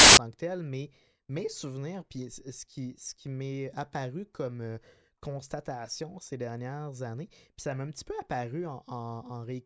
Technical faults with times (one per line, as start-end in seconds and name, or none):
0.00-0.17 file tags played as audio